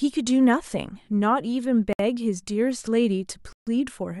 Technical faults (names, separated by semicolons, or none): Bluetooth stall